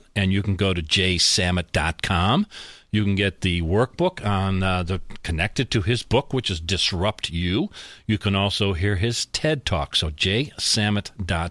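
No technical faults can be heard anywhere in this speech recording. There is no event in it that needs placing in time.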